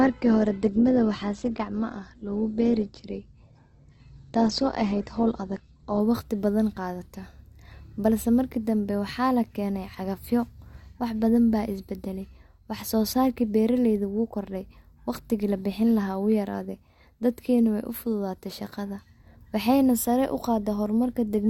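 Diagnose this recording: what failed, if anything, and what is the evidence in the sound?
Network stage: adaptive stream starting at a low bitrate leaves nothing above 8.2 kHz until 6.0 s, fitting 12 kbit/s Opus, then quality jumps gaplessly.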